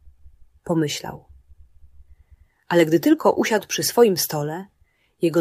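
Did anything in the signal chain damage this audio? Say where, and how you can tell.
Yes, at the converter: sample clock jitter runs through the whole clip. A grainy hiss rides on the sound and swells on loud, bright passages, sitting roughly 35 dB below the signal, and would disappear in silence. That tracking is the tell. A fixed noise floor or dither would persist through silence. Here, samples are taken on a clock wandering by around a microsecond and a half, so the error scales with how steeply the waveform is moving.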